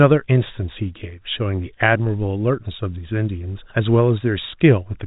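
Nothing stood out on listening to this speech, which comes across with the narrow band of G.711 telephone coding and no content above about 3.8 kHz.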